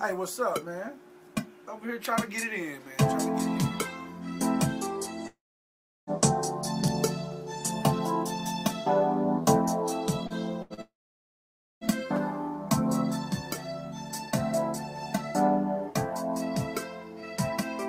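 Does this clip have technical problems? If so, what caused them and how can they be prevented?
Yes. There are two long network dropouts, from 5.27 to 6.1 s and from 10.81 to 11.84 s. The sound trails off into a fading buzz or hiss and then silence. That silence lasts about 0.71 s and then 0.91 s. The audio resumes further on, so roughly 0.8 s and 1 s are lost. The likely cause is that the stream stopped arriving entirely. A more stable connection, such as wired rather than congested wireless, prevents this.

Short concealed packet loss occurs at 10.27 s and again at 10.74 s. Each hole is about 40 ms. The receiver fills it by stretching the preceding sound, then blends back in. It is heard as a brief smear or wobble. Forward error correction or a slightly deeper jitter buffer prevents this.

A burst of packet loss runs from 10.62 to 10.73 s. About 80 ms in a row failed to arrive in time. 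The last sound is held as a buzz or hiss that fades. The audio then picks up later, with that stretch missing. Reducing network congestion and enabling redundancy prevents this.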